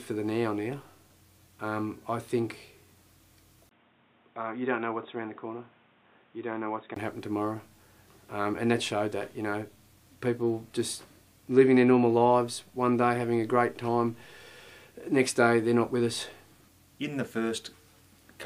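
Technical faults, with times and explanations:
3.69 to 6.96 s, input switched to a poorer device: after a 20 ms gap, the sound turns dull and boxy, with nothing above 3.8 kHz, a few dB quieter and over a new, faint noise floor. It is likely a change to another microphone. A plain filter would not change level or noise.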